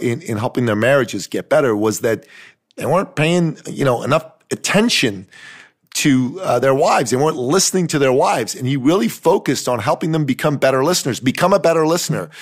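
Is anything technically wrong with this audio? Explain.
No, the speech signal in this recording shows no technical faults that a listener would hear.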